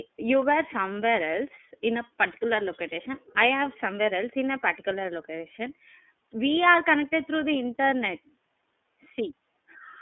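From start to finish, the speech passes through the iLBC codec. It is a narrowband VoIP coder. The sound sits in a telephone band of roughly 250 Hz to 3.5 kHz. Everything above that is gone, so the voice sounds boxed in and dull. Each frame is coded on its own, and the texture points to 30 ms frames and the 13.33 kbps mode. The coding damage is plainly audible. The voice comes out rough, buzzy and slightly synthetic.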